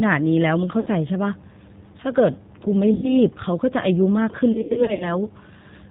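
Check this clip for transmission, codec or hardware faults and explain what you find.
Yes, there are two faults: G.729 codec coding throughout, and three stretches of VoIP packet loss concealed by the speech codec.

The G.729 codec colours the whole clip. The sound fits G.729A at 8 kbit/s. Each 10 ms frame is rebuilt from a vocal tract filter, a pitch predictor and a few pulses. Nothing above 4 kHz survives. The damage is plainly audible. The speech sounds muffled, slightly rough and synthetic.

Packet loss concealment appears three times. At 0.80 to 0.88 s, about 60 ms is missing, which fits two lost packets. At 2.94 to 3.14 s, 90 ms is gone, which points to three packets. From 4.52 to 5.17 s, losses total 240 ms, scattered over 480 ms, with the longest gap 90 ms. The decoder extends its last pitch and filter while lowering the gain. Each gap is stretched into a buzzy tone or a coloured noise that fades. 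The speech then stays weak or distorted briefly after packets resume.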